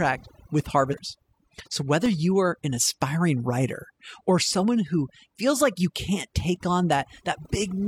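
Overdone noise removal affects the whole clip. The noise reducer was set too aggressively, so any frequency band whose level sits close to its noise estimate is pulled down hard or muted entirely. That removes the background but also strips the softer components of the speech. The result is a near-silent floor dotted with sparkling, isolated specks, which are surviving fragments of individual bands.

From 0.89 to 0.95 s there is damaged data in a compressed stream. Bytes in the encoded stream at this point are corrupt, so the decoder cannot interpret the affected frames correctly and loses its place until it finds a valid frame header again. What reaches the ear is a brief disturbance of about 60 ms.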